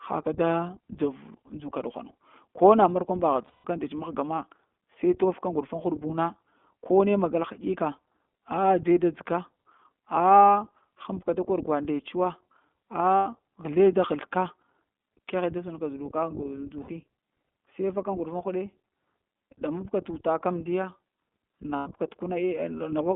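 The speech runs through the iLBC codec for its whole length. Each 20 ms frame is coded on its own, and the line is limited to roughly 200 Hz to 3.5 kHz. The coding damage is plainly audible, and the result fits the 15.2 kbps mode. The band limit gives the voice a thin, telephone-like quality with no air above 3.5 kHz, and the excitation coding adds a slightly rough, synthetic edge.

Lost iLBC frames occur four times: 3.46 to 3.67 s, 13.16 to 13.27 s, 16.82 to 16.90 s, and 21.76 to 21.88 s. Each time, packets went missing and the decoder concealed the gap by repeating the last pitch cycle blended with noise. The first gap, about 180 ms long, sounds like a held, buzzy vowel that fades. The later gaps are shorter, roughly 100, 60 and 100 ms. Because each frame stands alone, the voice snaps back cleanly right after each gap.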